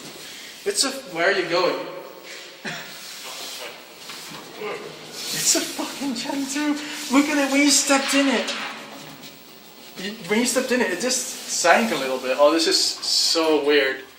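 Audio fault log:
Nothing stood out on listening; no fault was heard anywhere in the clip.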